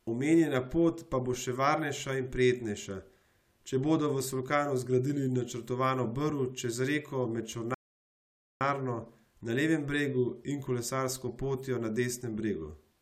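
At 7.74 s, right after "čez reko med", the speech halts in a rebuffering stall: the player exhausted its downloaded audio and waited for more data before continuing. The result is about 0.86 s of silence, until 8.61 s, after which the speech picks up at precisely the syllable where it stopped. Unlike a dropout or packet loss, nothing is missing across the gap. The sentence stays intact and only time is inserted.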